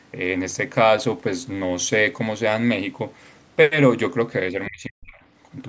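From 4.68 to 5.2 s the speech drops sharply, by around 40 dB at its deepest. About half a second is affected. This is speech suppressed in double talk. It was likely caused by an echo canceller mistaking this talker for loudspeaker echo while both sides spoke.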